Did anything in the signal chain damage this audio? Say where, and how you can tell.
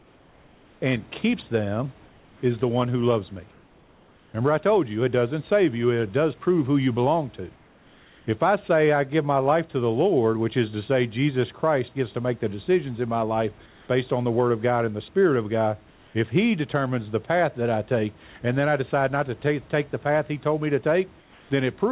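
Yes. In seven pauses, at 0.00–0.82, 2.06–2.42, 3.52–4.34, 7.56–8.26, 13.66–13.88, 15.90–16.14 and 21.20–21.50 s, the room's background gives way to a flat, featureless hiss about 2 to 4 dB quieter. It snaps back when the speech resumes. This is comfort noise in place of the background, likely from discontinuous transmission in call processing. The sender stops transmitting during silence, and the receiver synthesises smooth noise to fill the gap.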